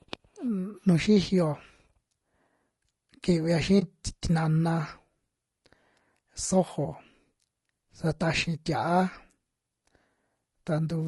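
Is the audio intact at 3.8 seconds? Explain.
No. Between 3.79 and 3.82 s, AAC frame loss with muting leaves a brief dip in the speech, about 20 ms of audio missing, which points to a single lost frame. The decoder zeroed that frame's spectrum, and the overlapping windows fade the sound out and back in. Throughout, including this moment, the speech sounds rough and grainy, with noise between the harmonics, likely from low-delay AAC compression at 32 kbps.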